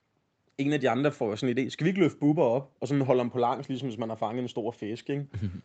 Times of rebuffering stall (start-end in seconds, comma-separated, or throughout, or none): none